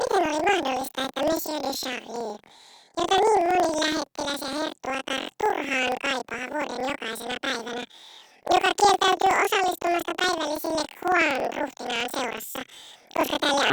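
This is a speech clip with planar audio read as interleaved the whole way through. The voice sits a full octave high and has a steady flutter at about 21.5 Hz. Each 46.44 ms block, which fits a 2048-sample buffer, holds all of one channel's samples and then the other's. Because it's read as alternating pairs, every block plays twice at double speed, left then right. So the pitch jumps up while the overall pace stays normal, and the block rate comes through as the flutter.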